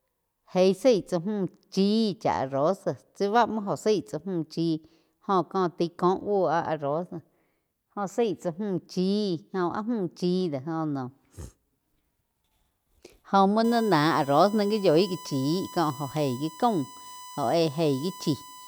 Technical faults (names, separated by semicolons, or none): USB whine